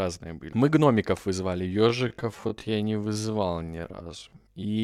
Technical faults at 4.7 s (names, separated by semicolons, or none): time-stretched section